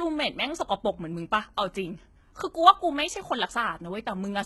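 The speech was likely passed through HE-AAC compression at a very low rate, consistent with roughly 16 kbps, and the damage is heavy from start to finish. Only the lower spectrum is properly coded; the treble is rebuilt by copying lower bands upward under a coarse envelope, so its harmonics no longer line up with those below. The top end stays bright but false, leaving s sounds gritty, metallic and lispy throughout.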